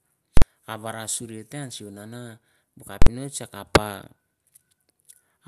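A speech recording with two distinct faults. At 0.37 to 0.42 s and again at 3.02 to 3.07 s there are invalid numbers at full scale: a calculation produced infinite or invalid values, and the output was pinned to one extreme value for a whole block of about 46 ms, which fits a 2048-sample processing block. Each event is a very loud pop at the block's start and end with no sound between, so at this short length it comes across close to a single harsh bang. From 4.21 s to 5.41 s there are periodic USB or driver dropouts. Every 63 ms something stalls the bus or audio driver, and around a millisecond of signal is skipped outright rather than replaced with silence. The result is a steady train of roughly twenty ticks riding on the speech, evenly spaced at that interval, with each tick marking a small jump where a sliver of audio has gone missing.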